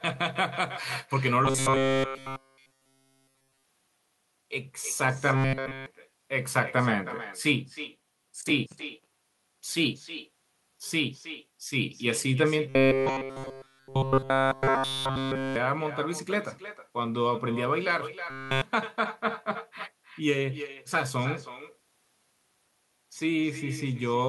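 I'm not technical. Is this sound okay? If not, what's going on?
No. There is echo with no canceller throughout. Your voice returns about a third of a second later as a quieter, thinner copy. The far end's speaker is being picked up by its microphone, and nothing removes it.

There is also robotic sound from repeated short buffers at 1.45–3.65, 5.36–5.86, 12.69–15.56 and 18.30–18.62 seconds. The speech becomes a stiff metallic buzz. Audio likely arrived too late, so tiny pieces were repeated over and over.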